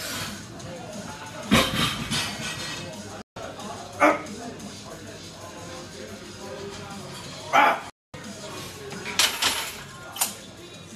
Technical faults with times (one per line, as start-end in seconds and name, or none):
3.22-3.37 digital broadcast dropout
7.90-8.14 digital broadcast dropout